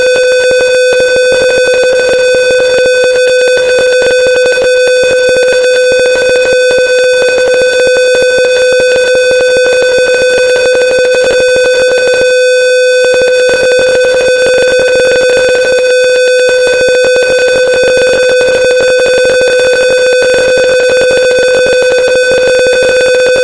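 Nothing here calls for comment, as there isn't a single technical fault to point to anywhere in these sounds.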